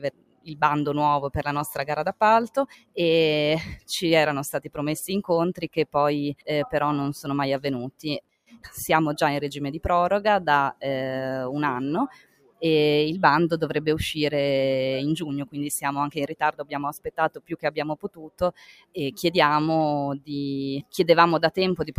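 A noise suppressor tuned for speech stays active throughout, treating sustained sound as noise, so level swings by roughly 15 dB and held parts pump and thin. The suppressor cuts sound hardest at 0.00–0.56, 2.49–2.97, 4.58–4.78, 5.55–5.95, 8.21–8.69, 12.09–12.63, 16.30–16.74 and 16.97–18.97 s, sinking it by about 19 to 21 dB, with the last dip the longest.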